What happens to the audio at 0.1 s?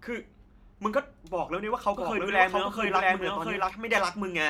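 Nothing goes wrong at 0.1 s; the speech plays through intact at that moment.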